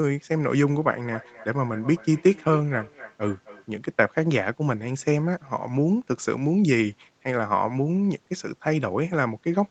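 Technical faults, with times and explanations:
1.03 to 3.74 s, feedback echo between two devices: The speech returns roughly every 0.3 s, thin and ringing, peaking about 16 dB below the direct speech. A second device replays it, and this microphone picks it up again.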